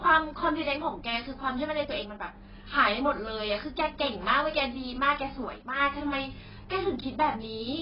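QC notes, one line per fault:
Throughout: AAC compression. The speech sounds dull and smeared, with heavy codec damage and nothing above 5.3 kHz. This is likely low-bitrate AAC-LC, which fits roughly 12 kbps: the encoder lowers its cut-off and coarsely quantises each frame's frequency lines against a hearing model.
2.02–2.35 s and 5.45–5.80 s: one channel drops out. The level falls abruptly by about 6 dB for roughly a third of a second each time and then recovers. The likely cause is one of two identical stereo channels going silent, halving the mono sum.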